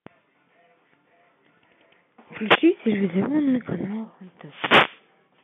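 From 2.46 to 2.60 s, and again for longer from 4.40 to 5.08 s, there's a wireless microphone noise hit. The FM radio link fades as reflections cancel out, so receiver noise swells over the speech as a swish of static, still confined to the narrow telephone band.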